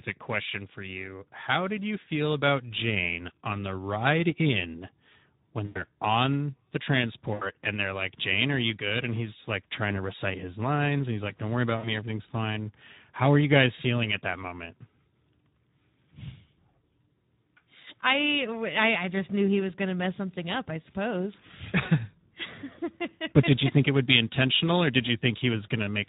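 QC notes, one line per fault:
Throughout: Speex codec. The speech has a hoarse, grainy texture, which fits Speex at around 11 kbps. At that rate the CELP coder has too few bits to model the excitation faithfully, so voicing turns rough and noisy instead of clean.
5.65–5.85 s, 7.33–7.45 s, 11.77–11.89 s: VoIP packet loss concealed by the speech codec. Dropouts of roughly 100 ms, 80 ms and 60 ms are each bridged by sound stretched from just before the gap that fades. The decoder is extending its last pitch and filter with falling gain, and the sound stays weak briefly afterwards.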